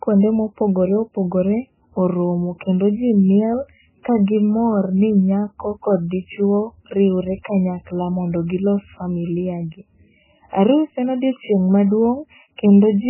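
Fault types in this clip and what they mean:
MP3 compression: The speech is lost above 3 kHz and has that heavy watery, swirly texture, which is most likely a low-bitrate MP3 encode, with damage at a level that fits something around 9 kbps. Short on bits, the encoder chops off the treble at a fixed point and drops the weaker frequency lines, which flicker in and out from frame to frame. That causes the swirl, and it runs through the whole clip.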